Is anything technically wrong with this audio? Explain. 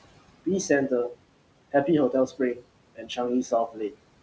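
Yes. Noise suppressor artifacts run through the whole clip. The suppressor estimates the steady room noise and pulls those bands down frame by frame, by about 21 dB here. The background sinks in the pauses and comes back up under the speech. A spectrogram shows the noise floor pumping with the speech and scattered isolated specks of residual noise between phrases. The room noise itself, about 16 dB below the speech, belongs to the recording.

Speech cut by the noise suppressor occurs three times: 2.27 to 2.61 s, 2.95 to 3.18 s and 3.68 to 3.96 s. In each, the suppressor mistook quiet speech for noise and turned it down with the background. The drops are about 14, 17 and 15 dB, affecting roughly 150, 150 and 200 ms of sound. Those parts sound swallowed or faint. The waveform envelope dips there, and the spectrogram shows speech energy thinning out in patches.

The call path uses G.722 at 64 kbps, which shows as nothing above 8 kHz.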